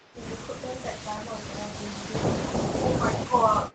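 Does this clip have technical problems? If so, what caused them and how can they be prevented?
Yes. In the first 0.16 s there is an echo leak: a very faint delayed copy of speech, far below the main talker, trailing the original by about 325 ms. What sets it apart from room reverberation is that fixed, clearly separated delay. It sounds like a distinct repeat rather than a diffuse tail. The likely cause is a far end playing the call on a loudspeaker, with its echo canceller letting a residue of its microphone pickup through. Using a headset, or tuning the canceller for that device's echo path, prevents it.

From 2.78 s to the end, the speech is suppressed in double talk: the level dips and thins in uneven pieces, at worst around 15 dB down. Unlike a network dropout, the sound doesn't vanish to silence or glitch. It is pushed down and dulled while remaining partly audible. This likely happened because both sides spoke at once and the echo canceller, unable to separate the near talker from loudspeaker echo, attenuated everything. 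Headsets on both ends, or a canceller with better double-talk detection, prevent it.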